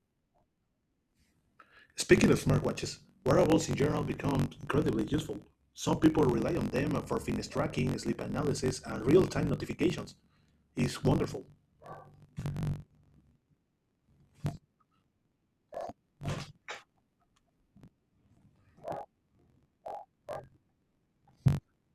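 From start to end, the speech carries a steady buzz at about 46.9 Hz. This is a block size mismatch (truncated). Each written block is longer than the next stage reads, so its tail is dropped, which fits a 1024-sample read. Speech runs 1.12 times fast with its timbre intact.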